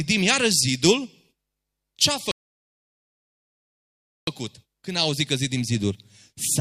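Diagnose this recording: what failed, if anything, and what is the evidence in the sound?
A rebuffering stall at the playback stage, fed by the network. After "ce a", the speech drops to silence at 2.31 s and stays silent until 4.27 s, then continues with "când a auzit că" exactly where it left off. No syllables are skipped or repeated, and the gap adds about 1.96 s to the running time. That pattern shows the player's buffer emptying before more streamed audio arrived, so output halted and waited rather than discarding anything.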